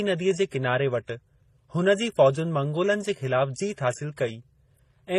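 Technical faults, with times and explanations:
Throughout, transcoding between lossy codecs: the speech carries two layers of coding damage heard at once, and nothing remains above 14.9 kHz. The damage fits a low-rate MP3, likely re-encoded as low-rate HE-AAC. The second encoder spent bits on the first one's artefacts and added its own.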